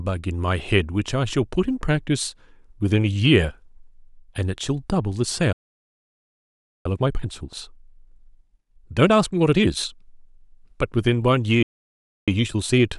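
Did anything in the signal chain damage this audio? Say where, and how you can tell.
Yes. At the playback stage the speech cuts to silence twice, from 5.53 to 6.86 s and from 11.63 to 12.28 s, then resumes mid-flow. These are playback stalls, likely from the player's buffer running dry. The waveform shows flat gaps, and the spectrogram shows blank columns.

Time-compressed catch-up follows each stall. The speech runs about 1.25 times fast from 6.86 to 9.86 s, and 1.1 times fast from 12.28 s to the end, at normal pitch. The player splices out small pieces and cross-fades them, so harmonic spacing stays normal while syllables crowd together.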